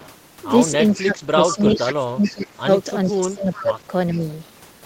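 Faint delayed copies of the speech, trailing the original by 434 ms, surface at 0.00, 0.93, 1.48 to 2.35, 3.06, 3.53 and 4.13 s. The quietest sit about 30 dB below the live speech and the loudest about 15 dB, with the stretch from 1.48 s the longest. This is an echo leak, likely from a far end playing the call on a loudspeaker whose echo canceller failed to remove all of what its microphone picked up and sent part of it back.

From 1.03 to 2.68 s, and again from 3.08 to 4.25 s, the talker's level sinks in patches while the other side is active, dropping by as much as about 20 dB. The affected time totals roughly one and a half seconds in the first span and under a second in the second. This is speech suppressed in double talk, likely an echo canceller that could not tell the near talker from the returning echo and turned both down.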